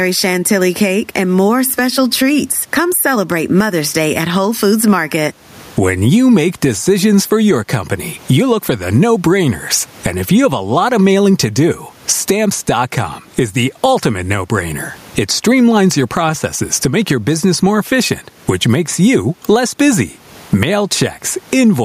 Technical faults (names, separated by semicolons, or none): gain pumping